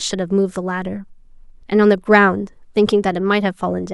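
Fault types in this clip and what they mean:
No technical faults turn up anywhere in this bit of speech; it just plays as it should.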